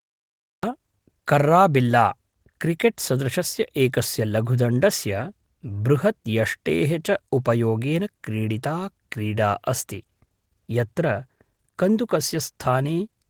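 The audio opens with a cut-off start: digital silence runs from 0 to 0.63 s, then speech begins abruptly mid-sound, with no natural attack or fade. Capture evidently started late, so the onset is clipped. Light Opus voice coding is present throughout.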